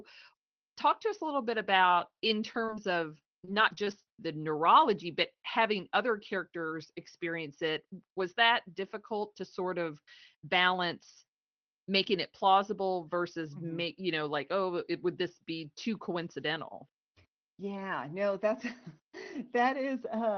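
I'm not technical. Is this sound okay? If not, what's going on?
No. Between 1.83 and 4.08 seconds, just after "us a little bit" and before "the neurology but having", the speech has brief ticks and small hiccups. These are scattered short gaps: about seven tiny pieces of the call audio went missing, and the receiver hid each one by stretching the sound just before it.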